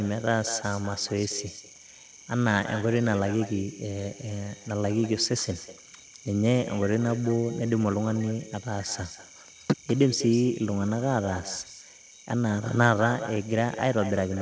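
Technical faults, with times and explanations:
Throughout, echo with no canceller: each phrase returns about 14 dB quieter and roughly a fifth of a second later, picked up from the far loudspeaker and sent back.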